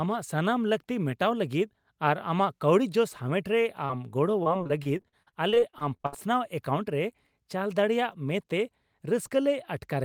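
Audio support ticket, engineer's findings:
Short concealed packet loss, 3.85–3.91 s: brief smear in the speech, about 40 ms of audio missing. Receiver jitter buffer/decoder concealment extended the last sound across the hole, then crossfaded back. Probable component: network path, late or dropped packets.

Repeated packet loss (robotic sound), 4.43–6.14 s: choppy speech with fragments missing. Seventeen gaps in quick succession, longest about 63 ms, roughly a quarter of the stretch synthesized by concealment. Probable component: network path, sustained loss or jitter burst.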